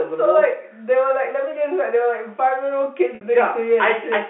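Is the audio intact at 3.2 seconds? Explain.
No, there is packet loss with pitch repetition from 3.15 to 3.21 s. About 60 ms of audio is missing, consistent with two lost packets. The receiver repeats the last pitch period and fades it out, giving a brief buzzy hold that dips toward silence before the sound cross-fades back in.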